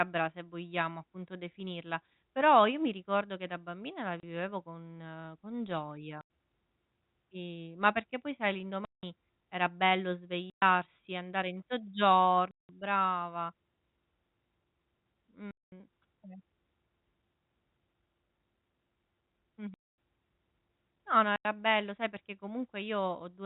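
Packet loss filled with silence: packets were dropped and replaced by silence, all gaps multiples of 30 ms, which fits 30 ms packets. The speech cuts out with hard edges at 4.2 s (30 ms), 6.21 s (90 ms), 8.85 s (180 ms), 10.5 s (120 ms), 12.51 s (180 ms), 15.51 s (210 ms), 19.74 s (240 ms) and 21.36 s (90 ms).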